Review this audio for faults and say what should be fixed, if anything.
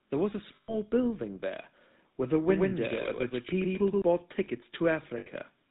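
The whole speech clip carries GSM full-rate codec damage that is plainly audible, which fits a 13 kbps GSM full-rate link. The codec models the vocal tract and excites it with a sparse, regularly spaced pulse train, so fine detail in the source is discarded and nothing above 4 kHz survives. The result is a buzzy, gravelly roughness over every syllable and a dull, band-limited top end. To prevent it, carry the call over a wideband or higher-rate codec rather than GSM full rate.

Lost GSM frames occur from 0.56 to 0.75 s and from 5.18 to 5.27 s. In these spans the decoder has no valid data, so it repeats the parameters of the last good frame. The first gap is about 120 ms, which fits roughly six 20 ms frames. The second is about 80 ms, which fits about four. Both are heard as a rough, metallic ringing that holds the preceding sound instead of continuing the speech. To prevent it, reduce frame loss on the radio or transport path, using better coverage, error protection or retransmission.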